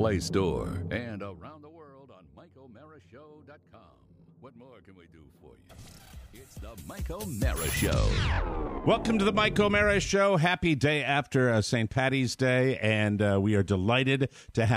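From 0.77 to 1.72 s the level drops by roughly 25 dB in coarse steps, about a hundred per second, with no smoothing between them. This is zipper noise. Each jump leaves a small click, so a fine ticking rides on the fade. The same zipper noise returns from 6.33 to 7.80 s as the level climbs back by roughly 25 dB.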